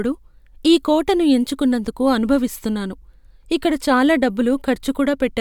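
The speech recording shows no technical fault anywhere in the signal.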